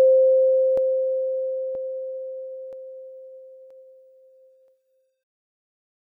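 A music clip with audio missing between chunks. Brief skips occur at 0.77, 1.75, 2.73, 3.71 and 4.68 s, about once a second. Each loses a sliver of around 20 ms, joined without silence. The likely cause is a 1-second chunked process dropping audio at each handover.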